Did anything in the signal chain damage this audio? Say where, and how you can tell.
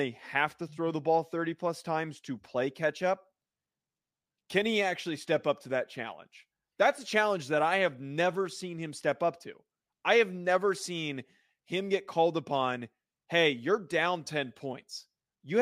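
No, nothing in the signal chain damaged this audio.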